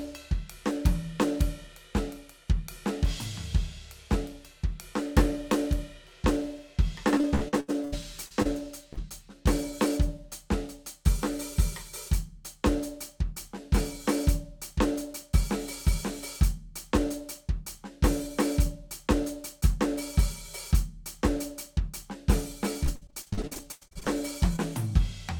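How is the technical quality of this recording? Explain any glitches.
The music suffers from network packet loss in two bursts, each a run of patched gaps followed by one isolated dropout.

From 7.17 to 8.47 s there is repeated packet loss (robotic sound). Eight gaps, the longest 77 ms, were each filled by continuing the last sound, so about 27% of that stretch is synthetic. The result is choppy with pieces missing, not a single smear.

From 8.93 to 8.99 s a short concealed packet loss replaces 40 ms with an extension of the preceding sound. It is heard as one brief wobble, distinct from the rapid chopping before it.

From 22.85 to 24.10 s the repeated packet loss returns, denser this time. Eighteen gaps, the longest 95 ms, leave roughly 40% of the span concealed.

From 24.56 to 24.60 s another short concealed loss fills a 20 ms hole. It is a single brief smear rather than sustained choppiness.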